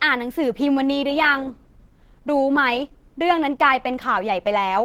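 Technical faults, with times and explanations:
Throughout, Opus compression: the speech is plainly hoarse rather than swirly like MP3, yet still reaches 20.2 kHz, likely hybrid-mode Opus at around 16 kbps.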